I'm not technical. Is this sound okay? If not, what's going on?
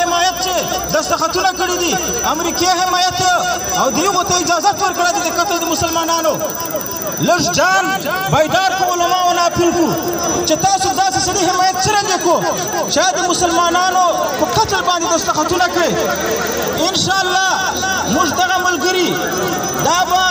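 No. From 0.11 s to 20.26 s there's a faint, steady ticking, about twenty times a second, almost like a soft rattle. These are clock slip clicks, likely from two devices running on slightly mismatched clocks, so a single sample gets dropped or repeated at every slip.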